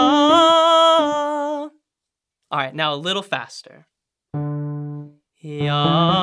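No technical faults are audible.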